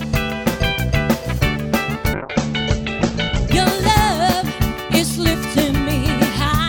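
At 2.14 s the audio suffers a call bitrate drop that lasts until about 3.57 s. The link's bandwidth estimate collapsed, so the encoder was starved of bits. The drop sounds like a fall from around 96 kbps to near 10 kbps, held at its lowest for about 1.36 s. Coding turns coarse and rough. The top end is cut from 20 kHz to 8 kHz, so the sound goes muffled and dull. Full detail returns after 3.57 s.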